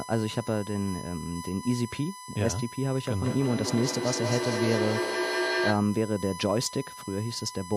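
USB whine runs throughout: a steady 1 kHz tone, roughly 15 dB below the speech, as the bus's 1 ms frame current leaks into the audio through power or ground.

Feedback echo between two devices, from 3.25 to 5.9 s: a second device replays this microphone's sound, which gets picked up again, repeating about every fifth of a second and peaking about 1 dB below the speech.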